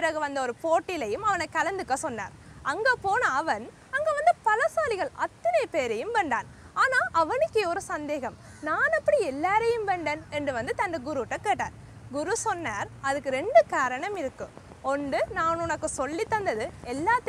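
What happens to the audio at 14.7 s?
Something in the signal chain is injecting short pulses at a steady rate, most likely interference from nearby equipment or a faulty connection or power supply. At 14.7 s the audio is inside a train of clicks running from 13.17 s to 17.27 s: about thirty near-identical clicks, evenly spaced at 7.08 per second. Each reaches roughly the level of the sound itself, so a regular ticking sits clearly on top of everything, pauses included.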